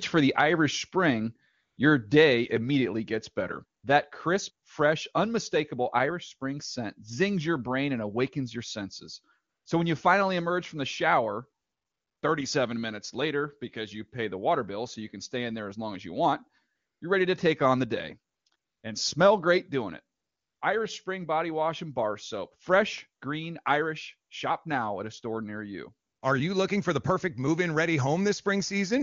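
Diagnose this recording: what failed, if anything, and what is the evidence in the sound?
The failure is in the sending phone's discontinuous transmission. Its voice activity detector kept declaring the talker silent, stopped sending speech frames, and the far end filled each gap with AMR comfort noise built from a rough level-and-spectrum estimate. Ten such gaps occur between 1.53 s and 26.21 s, from 20 ms to 580 ms long, the longest at 11.63 s. Each time, the real background drops out for a smooth, steady hiss that switches in and out. The speech itself, coded with AMR wideband (HD Voice), stays clear, which points to a high bitrate.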